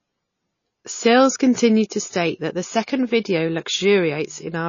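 A speech recording with plainly audible MP3 compression throughout: nothing above 7.1 kHz, with watery, swirling artefacts that point to a low bitrate, likely around 26 kbps.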